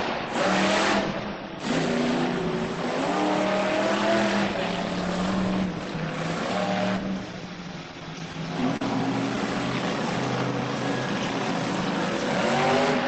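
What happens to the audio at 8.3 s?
The audio stutters from 7.91 to 8.82 s. These are repeated stalls. Packets arrived late, so the jitter buffer ran dry seven times. Each time the last sound was stretched to fill the wait, about 103 ms in all, each stall at most 41 ms. Nothing is lost, but the sound drags and hiccups.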